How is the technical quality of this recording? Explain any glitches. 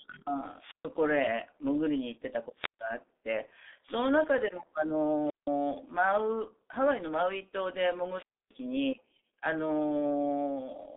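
The quality is poor. The whole recording runs through a G.723.1 codec. Its long frames and slow-updating voice model leave the speech muffled and hoarse, with smeared consonants, which fits a low rate of around 6 kbit/s. The band sits between 250 Hz and 3.7 kHz, with nothing above 3.8 kHz.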